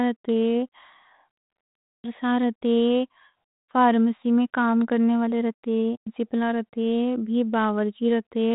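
No technical faults can be heard anywhere in this speech.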